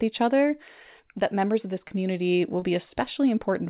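At 1.88 to 1.92 s, just after "that members of this", and again at 2.60 to 2.64 s, there is short concealed packet loss. About 20 ms of audio never arrived in time. The receiver extended the preceding speech to cover each gap. Each one is heard as a brief smear or wobble.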